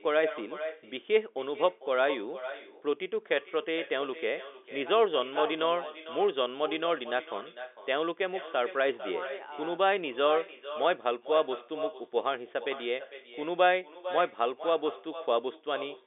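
From start to finish, the speech carries an echo with no canceller. Each phrase returns about half a second later as a fainter copy, around 13 dB below the original. The far end is likely playing the call on a loudspeaker. Its microphone picks that sound up and sends it back across the network, and nothing strips it out. The returning copy sounds thin. It trails every phrase, still band-limited to the telephone range of roughly 300 Hz to 3.6 kHz.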